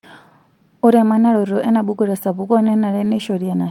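Scattered short gaps run from 2.41 to 3.46 s, after "emanaroto enabuku": about seven lost packets, each patched by extending the preceding sound, leaving brief ticks and hiccups.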